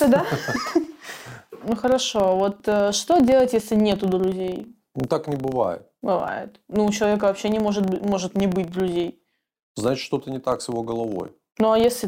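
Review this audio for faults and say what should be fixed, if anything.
Throughout the speech, a buzz at 25 Hz points to a filter restarted on every block: it loses its state at each 40 ms boundary and starts from silence, leaving a small transient that rises and falls with the speech level. A spectrogram would show evenly spaced vertical ticks every 40 ms, and a waveform would show a small step at each block start. Carry the filter's state over from one block to the next instead of resetting it.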